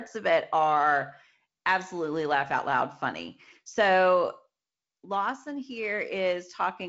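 Listening to this speech recording, nothing stood out as a technical fault, with the sound carrying the band-limited character of wideband telephone coding and nothing present above about 7.7 kHz.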